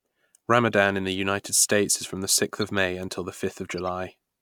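Speech, with two stretches of corrupt frames decoded. An artifact from 2.61 to 2.63 s peaks about -20 dBFS from one damaged frame, and a fainter one at 3.78 s reaches about -30 dBFS across several frames. Flipped bits misplaced energy in frequency. Unlike a dropout or click, these frames play misplaced sound that lasts about as long as each damaged frame.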